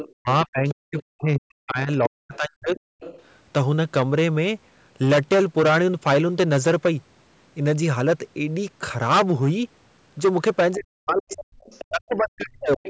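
From start to finish, every loud peak of the speech breaks into a harsh, crackling fuzz. This is hard clipping: the signal was driven about 15 dB past what a stage in the chain could pass, so roughly 7 percent of samples have their tops sheared flat.

In the first 0.08 s, and again from 0.69 to 1.02 s and 2.77 to 3.33 s, a second, fainter voice can be heard under the talker. This is the other side's voice leaking through, likely loudspeaker playback of the far end that the echo canceller failed to fully remove. The first scrap is only about 10 dB below the speech, and the later ones sit well under it.

Between 0.08 and 2.95 s the talker's own speech dips and drops out in pieces, falling by as much as about 40 dB across roughly two seconds in total. This is speech suppressed in double talk: both sides were likely talking at once, and the canceller, unable to separate them, turned everything down.

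The same ducking returns from 10.75 to 12.82 s. Within it, from 11.3 to 11.85 s, the other side's voice leaks through again, faint. A last brief scrap comes in the final 0.07 s from 12.83 s. The call's microphone processing leaves nothing above 8 kHz.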